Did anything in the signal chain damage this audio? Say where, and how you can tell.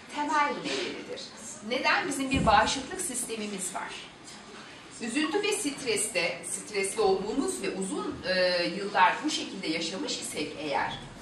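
No, nothing stood out on listening that would point to damage at any stage of the chain.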